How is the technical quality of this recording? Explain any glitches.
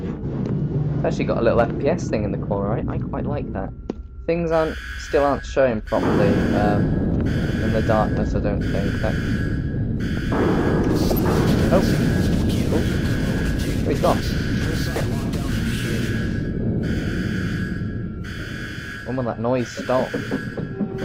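The recording has three short glitches, all DAB burbling, at 7.44–7.55 s, 11.09–11.19 s and 14.96–15.06 s. Weak reception lets bit errors of a fraction of a percent corrupt the MP2 audio data, so individual sub-bands get short blips of noise. The result is brief noise blips, which show up on a spectrogram as isolated bright blocks in narrow frequency bands.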